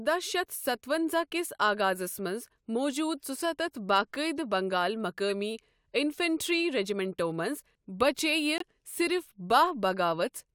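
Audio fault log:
8.58–8.62 s, corrupt frame muted: the speech drops into dead silence for about 44 ms, starting and ending abruptly, a gap that points to a single compressed frame. Damaged bits made the decoder reject that frame, and the player substituted silence rather than guessing. Unlike packet-loss concealment, nothing smeared or repeated fills the hole, and unlike a buffer underrun, the speech resumes on schedule with no delay or stretching afterwards.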